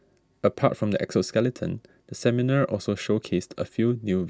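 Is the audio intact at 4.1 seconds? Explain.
Yes, the audio is intact at 4.1 seconds, with no fault to be heard at that moment.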